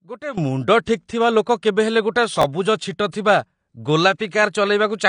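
AAC compression runs through the whole speech clip: nothing sounds above 9.8 kHz, and the codec damage is plainly audible as a dull, smeared quality. This likely comes from AAC-LC encoding at a low bitrate, fitting about 32 kbps, where the encoder trims the top band and quantises coarsely.

A sudden gain jump hits at 0.38 s and holds to the end: speech and background noise step up together by about 14 dB with no ramp in between, likely from a gain setting applied instantly rather than faded in.

Pre-echo appears at 0.85 s, 3.10 s and 4.18 s, where a short hiss of 23 ms, 26 ms and 14 ms respectively creeps in just before a sharp attack. The transform block spread quantisation noise scaled for the loud onset back into the quiet moment preceding it, softening each attack.

Chunks out of order occur from 2.42 s to 2.44 s: a 5.8 ms piece of audio plays three chunks late, after material that should follow it. 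Nothing is missing, but the sequence is scrambled, giving a brief jumbled moment with hard joins.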